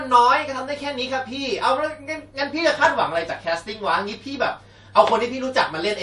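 MP3 compression damage runs through the whole speech clip: nothing sounds above 11.3 kHz, and the audio has a watery, swirling quality with smeared onsets. The likely cause is an encoder short of bits, fitting roughly 48 kbps, cutting treble and switching weak frequency lines on and off between frames.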